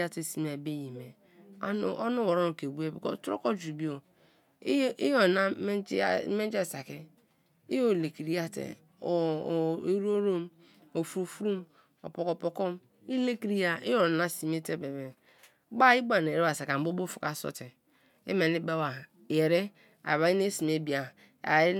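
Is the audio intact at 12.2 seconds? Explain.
Yes, the audio is intact at 12.2 seconds, with the speech running through that moment without any audible fault.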